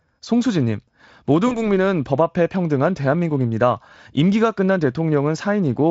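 At 1.47 s the speech hits a bit of VoIP packet loss concealed by the speech codec. The gap sounds like about 40 ms gone, which fits two missing 20 ms frames. The decoder fills it by carrying its last pitch and filter forward at falling gain, so you hear a short buzzy or noisy smear that fades. It stays weak and a little off until about 1.69 s while the decoder recovers. Around it, the Speex coding at this higher rate leaves little or no audible damage.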